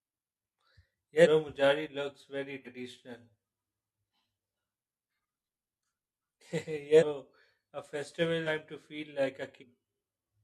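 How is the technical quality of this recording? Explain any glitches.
The recording has five skips where compressed frames were dropped. At 1.22, 2.62 (after "looks very"), 6.98, 8.43 and 9.58 s, compressed frames are skipped: roughly 150, 100, 300, 300 and 150 ms of audio vanish. The jumps come in whole-frame steps, which fits a 42.7 ms codec frame.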